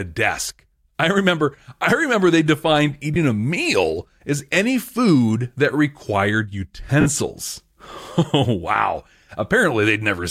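Lost LE Audio frames at 3.14 to 3.16 s, after "I remember they defined", and 7.01 to 7.06 s, after "any food that required", leave 20 ms and 50 ms gaps, consistent with two and five 10 ms frames. The decoder repeats the last spectrum with random signs, smearing the speech into brief noise that fades during the longer loss.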